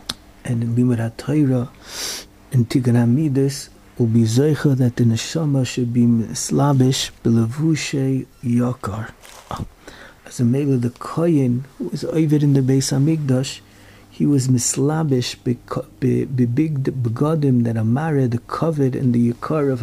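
Nothing is technically wrong with this audio.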